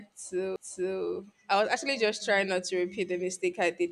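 At 0.56 s the speech gives a brief tick and a near-instant dropout lasting only a few milliseconds, then carries on from a different point in the recording, so the flow is broken just before "I was actually just". This is a CD skip. A knock or a flaw on the disc knocked the laser onto another turn of the spiral track. The player muted for that instant and resumed reading from the displaced position, which causes the tick and the discontinuity.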